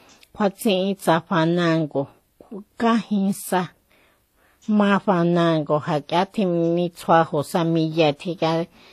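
Throughout the speech, nothing is present above 14.9 kHz, and two different kinds of coding artefact are heard layered together. This points to transcoding between lossy codecs, likely a low-bitrate HE-AAC encode re-encoded to WMA, with the second codec spending bits on the first one's damage and adding its own.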